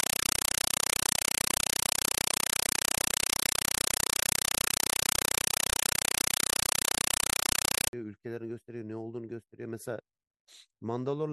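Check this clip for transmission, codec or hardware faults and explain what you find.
One fault is present. From 0.0 to 7.93 s, loud chattering static with 5.33 ms bursts repeating at 31.25 Hz replaces the speech: compressed stream played as audio, most likely an undecoded AC-3 stream read as raw samples.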